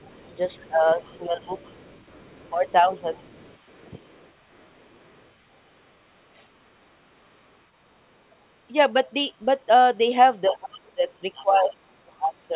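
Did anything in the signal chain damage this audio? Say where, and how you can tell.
Yes. The call processing stage left other side's voice leaking through. A faint second voice sits under the talker from 0.0 to 7.52 s, at about 30 dB below the speech. It returns louder from 10.50 to 11.69 s, at about 20 dB below. The device was playing the far end on a loudspeaker, and the microphone picked it up. The echo canceller most likely failed to subtract all of it, so residue passes into the send path.

The same stage also caused speech suppressed in double talk. The talker's level dips from 0.59 to 1.51 s, by up to about 15 dB over roughly half a second. It dips again from 2.50 to 3.21 s, by about 10 dB. A brief drop of about 15 dB follows at 3.80 to 3.91 s. The deepest cut, about 25 dB, runs from 10.49 s to the end, overlapping the louder leak. This is likely a suppressor that could not separate near speech from echo, so it ducked both.

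The network stage caused a short concealed packet loss at 1.32 to 1.36 s. About 20 ms of audio never reached the decoder in time. The receiver synthesised about 18 ms to cover the gap, extending the last sound and then blending back. It is heard as a brief smear inside the first suppressed stretch. Across the clip, nothing is heard above 4 kHz, which fits a narrowband telephone codec.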